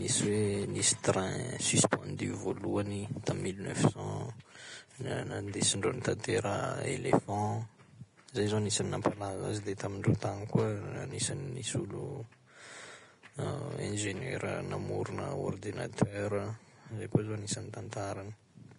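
Low-bitrate encoding, likely Vorbis compression at a rate that fits roughly 32 kbps, affects the speech from start to finish. The encoder discards everything above 10.6 kHz and quantises the remaining treble so coarsely that detail turns into grainy hiss, roughening tones and smearing consonant attacks.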